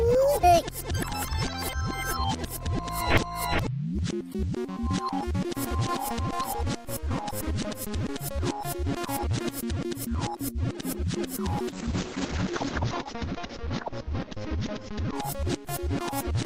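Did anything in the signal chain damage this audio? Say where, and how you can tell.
Yes, the damage comes in at the codec stage of the call, as a call bitrate drop starting around 11.69 s and running to the end. From there the sound goes rough and watery, and the top end closes in from about 20 kHz down to about 8 kHz. That's the encoder being told to spend far fewer bits, sliding from 48 kbps to 8 kbps, so it codes coarsely and trims the highs. It sits at its worst for about 1.7 s and never recovers before the clip ends.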